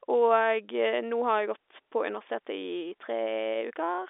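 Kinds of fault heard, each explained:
No kinds of fault are heard in this speech, which comes through a normal telephone line band that stops at about 3.7 kHz.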